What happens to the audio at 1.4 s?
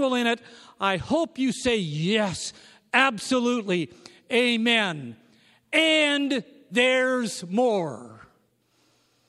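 Nothing goes wrong at 1.4 s; the speech there plays through intact, with no dropout, click or distortion.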